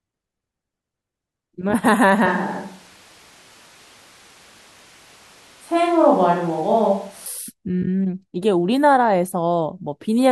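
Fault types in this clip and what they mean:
Switch to a distant microphone: from 2.26 to 7.26 s the speech turns suddenly roomy and hollow, with thinner bass and room noise roughly 30 dB below it, while the level holds steady, likely because the close microphone dropped out and a farther one took over.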